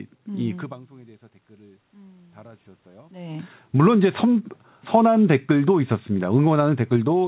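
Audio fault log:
0.68–4.51 s, automatic gain rising: the level reaching the gain control dropped by about 23 dB, around where the talker seems to move away near 0.5 s, so the control judged the input too quiet and slowly raised its gain by about 7 dB over nearly four seconds. Voice and room noise swell together as a single gradual lift. This is not a sudden jump, and the added gain makes up only part of the lost level.
4.97–7.27 s, automatic gain falling: the gain control judged the input too loud and began pulling its gain back down, still easing it through the end of the clip. The sound starts this stretch loud and then sinks steadily. The room noise drops in step with the voice, which marks a gain change rather than the talker moving. The narrow, telephone-like band with nothing above 4 kHz fits a G.711 A-law call path at 64 kbps.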